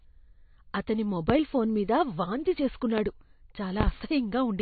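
Speech recorded with a hard treble ceiling, nothing above 4.5 kHz, and a watery, swirling quality throughout, with smeared consonants. This is MP3 compression, likely at a low bitrate around 28 kbps. A simple low-pass filter would dull the sound without the warbling that comes from weak frequency lines switching on and off between frames. Sharp loud pops land at 1.30–1.33 s, just before "ఫోన్ మీద వాంతి", and at 2.98–3.02 s, just after it. A double pop follows at 3.81–3.90 s. They stand roughly 15 to 20 dB above the speech. These are likely voltage spikes from a plug, switch or driver glitch. Unlike a dropout or clipping, the speech carries on unbroken beneath each pop.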